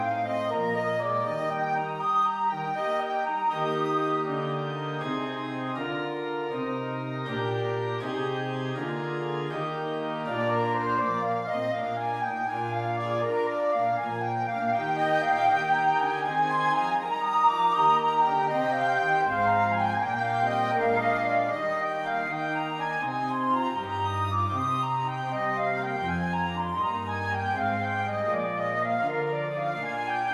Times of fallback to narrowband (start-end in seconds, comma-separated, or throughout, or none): none